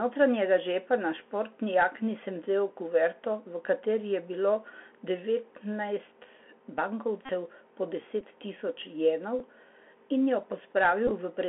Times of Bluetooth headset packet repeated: 7.25-7.31, 8.21, 9.39, 11.07-11.11

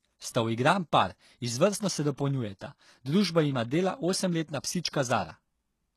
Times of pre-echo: 2.59-2.61

